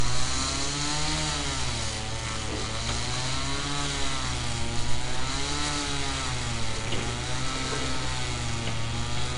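A recording of sounds carries 4-bit ADPCM compression for its whole length, plainly audible as gritty hiss that rises and falls with the level, since each sample is coded as a coarse step from a prediction. Nothing is present above 10.6 kHz, and the data rate fits about 89 kbps, pointing to a roughly 22 kHz sample rate. Unlike perceptual codecs, there is no swirling or warbling, only broadband grit tracking loudness.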